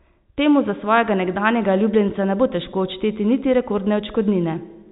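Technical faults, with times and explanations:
Nothing stood out on listening to this speech, which carries the narrow band of G.711 telephone coding with nothing heard above about 3.8 kHz.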